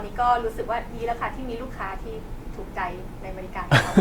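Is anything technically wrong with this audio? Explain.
Yes. Generation loss runs through the whole speech clip. The sound is swirly and hollow. It is more smeared than a single lossy encode at this quality would leave it, and consonant attacks blur. The likely cause is repeated lossy coding, around seven passes, with a character that fits Opus at 64 kbit/s. Each pass quantises on a shifted frame grid, so the noise builds up. Content still reaches about 20 kHz.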